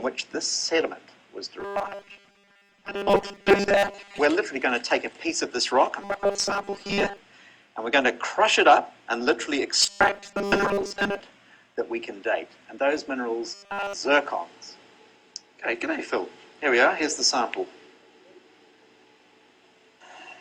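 A metallic 200 Hz buzz is heard from 1.60 to 4.20 s, 6.02 to 7.18 s, 9.82 to 11.20 s and 13.54 to 13.93 s. This is robotic sound from repeated short buffers, likely a 5 ms chunk looping in place of most of the real audio, and all of it in the final stretch.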